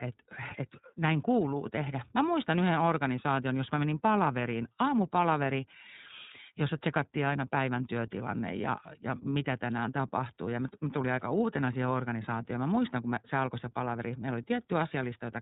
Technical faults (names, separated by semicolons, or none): iLBC codec